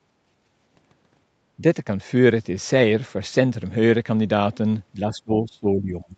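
From 0.36 to 0.54 s the echo canceller, reacting to loudspeaker playback, pulled the microphone gain down hard: background gated by the echo canceller. The room sound behind the speech sinks by about 7 dB for roughly 150 ms, then returns.

From 4.94 to 6.15 s the speech dips by as much as about 20 dB, fading and breaking up for around a second. The likely cause is speech suppressed in double talk: the canceller could not separate the near talker from echo and attenuated both.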